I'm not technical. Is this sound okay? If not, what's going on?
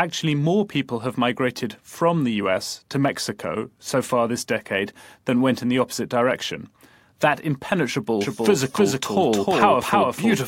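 No. From 8.21 s to the end, everything repeats equally loud about a third of a second later. This doubled audio track is likely a second, slower recording mixed in.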